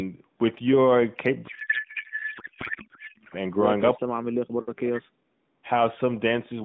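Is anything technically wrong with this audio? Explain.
Yes, three faults can be heard in this speech clip.

From 1.48 to 3.35 s there is a codec payload misread. The AMR frames were packed in octet-aligned form but decoded as if they were bandwidth-efficient, so every field sits at the wrong bit offset. The decoder still produces output from frames that look valid. As a result, the speech is replaced by a garbled, warbling noise that barely tracks it until correct decoding resumes.

From 3.96 to 5.26 s the speech is suppressed during what is likely double talk. The echo canceller apparently could not tell the near talker from the loudspeaker echo while both were active, so it turned the whole signal down. The voice sinks, falling by around 40 dB at its deepest, for about a second and a half in total.

From 5.54 to 5.59 s there is background gating by the echo canceller. While the loudspeaker was active, the canceller clamped down on the microphone path. 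The room sound dips by about 8 dB for roughly 50 ms, then returns as soon as the canceller releases.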